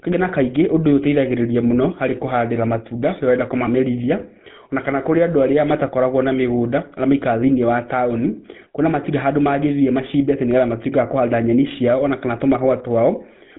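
From start to end the speech carries the GSM full-rate codec's plainly audible damage. The coder reconstructs sound by passing a regular pulse train, thinned to every third excitation sample, through a vocal-tract filter, which gives the buzzy, gravelly roughness heard throughout, a texture that fits the 13 kbps full-rate coder. Nothing survives above 3.8 kHz, so sibilants and upper harmonics are missing and the sound is narrow and muffled.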